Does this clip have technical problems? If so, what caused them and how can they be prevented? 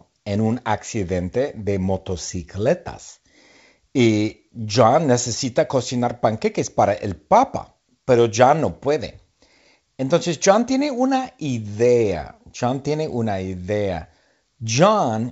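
No, the speech comes through a G.722 wideband telephone path at 64 kbit/s, which keeps it clear up to about 7 kHz with at most a faint trace of the coding, so there is nothing here that needs preventing.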